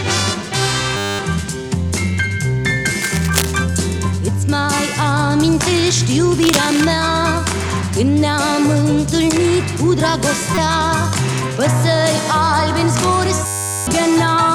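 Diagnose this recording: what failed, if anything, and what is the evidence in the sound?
At 0.97 to 1.19 s and again at 13.46 to 13.87 s, the sound freezes into a steady buzz at 100 Hz. This is a system hang loop at the driver or buffer stage. The host stopped supplying audio, and the hardware kept replaying the same 10 ms piece. It repeats 22 times in the first event and 41 times in the second. That short loop fits a buffer of about 10 ms. Roughly a fifth of a second of audio is lost in the first event, and about 0.4 s in the second.

From 3.01 to 3.52 s there is a burst of rough, uneven crackle and rustle over the sound, about 10 dB below it. A second burst runs from 6.35 to 6.92 s and is louder, about 5 dB below the signal. This is cable scratch noise in the analogue wiring. The likely cause is a worn cable, connector or control being disturbed. Its contact resistance jumped erratically while it moved. 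That is why the noise comes in dense, irregular bursts rather than a steady hiss.

At 10.55 s there is a sudden sharp blip lasting about 32 ms. This is a corrupt frame decoded at the codec stage. Flipped bits reached the decoder, and it rendered the damaged data anyway. The misread gains and codes placed strong energy at the wrong frequencies. The blip's length matches about two damaged frames.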